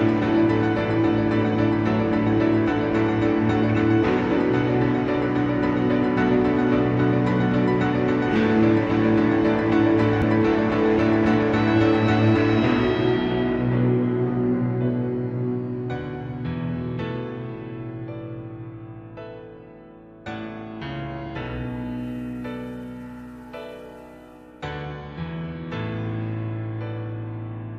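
At 4.37 s and again at 10.22 s there's a very short chirp or blip, barely a blink each time. That's damaged data in a compressed stream: a bit of the encoded file was lost or mangled, so the decoder couldn't read those frames properly, lost its place and had to hunt for the next good frame header before the sound picked back up.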